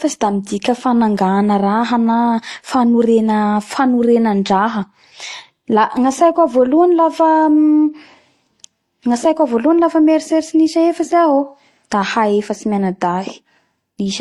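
Speech carrying layered compression artefacts throughout, with nothing above 12.1 kHz, likely transcoding between lossy codecs. Unlike single-codec compression, several distinct artefact textures are heard stacked together.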